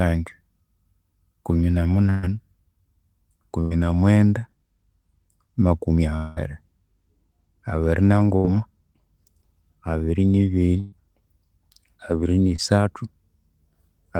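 At 2.09 to 2.25 s the speech hits the first burst of packet loss. About 140 ms of audio never arrived, and the receiver papered over it by extending the last sound and fading it down, so the speech stalls into a held, dimming sound before jumping ahead past the missing stretch. The same fault returns at 3.61 to 3.72 s (about 100 ms lost), 8.36 to 8.46 s (about 80 ms) and 10.80 to 10.94 s (about 120 ms). On a spectrogram each appears as frozen content that loses energy toward a hard edge where normal speech restarts. The waveform shows a shrinking continuation rather than varied speech.

From 6.16 to 6.38 s comes a longer interruption, a long network dropout, most likely a stretch where nothing reached the receiver. About 200 ms is replaced by a synthetic continuation that never falls to silence. It is heard as a drawn-out sound that keeps decaying until the speech resumes further on with content gone. 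Visually it is a wider band of smeared, repeated texture that fades steadily, with a sharp restart.

At 12.56 to 12.60 s a short concealed packet loss removes about 20 ms. The decoder patches it with a continuation of the preceding sound and blends back into the real audio, leaving a brief smear. It shows as a thin vertical blur in the spectrogram and a tiny discontinuity in the waveform.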